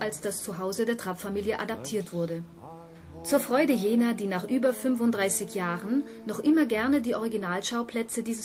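No technical faults can be heard anywhere in this audio.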